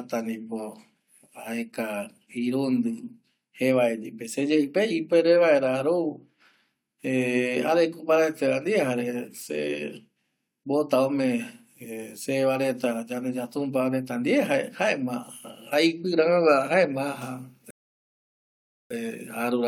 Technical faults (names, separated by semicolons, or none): rebuffering stall